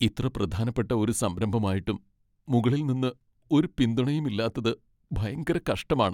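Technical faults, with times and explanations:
No technical faults can be heard in the speech.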